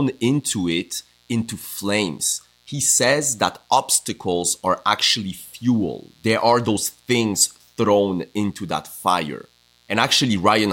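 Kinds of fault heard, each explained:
Mains buzz: switching spikes from 60 Hz mains leak into the chain, laying a steady, raspy buzz with high harmonics faintly under the speech throughout.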